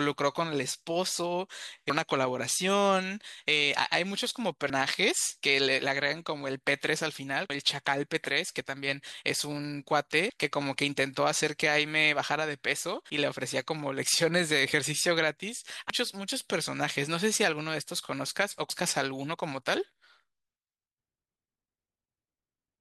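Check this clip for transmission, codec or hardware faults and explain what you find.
The speech has one fault, heard five times: audio missing between chunks, at 1.90, 7.50, 13.10, 15.90 and 18.70 s. At each point roughly a fifth of a second of speech vanishes and the two sides butt together with no silence, so the sound jumps forward and can clip part of a word. The likely cause is a recorder working in 3.0-second chunks that loses a short stretch at each handover. Unlike a dropout, there is no silent gap, only a seamless jump.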